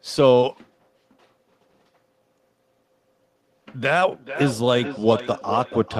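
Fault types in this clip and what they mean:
Feedback echo between two devices: two devices in the same room share the call, so one plays back what the other's microphone sent and that microphone catches it again, which neither device's echo canceller can remove. From about 3.88 s to the end at 5.99 s the speech comes back roughly every 400 ms, thinner and more ringing each pass, peaking at about 12 dB below the direct speech.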